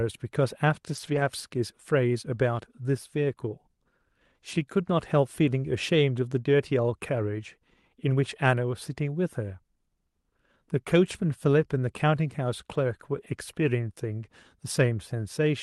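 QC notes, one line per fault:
0.95–1.21 s, 4.55–4.57 s and 13.17–13.23 s: lost packet rebuilt from error correction. There are no dropouts, but the speech turns briefly rough and grainy for 140 ms, 20 ms and 40 ms respectively. That points to lost Opus packets, each covered by the low-bitrate redundant copy carried in the following packet. The decoder played that coarser copy in place of the missing audio, so the gap is filled with a noisier, less detailed rendering. The call path is band-limited to 12 kHz.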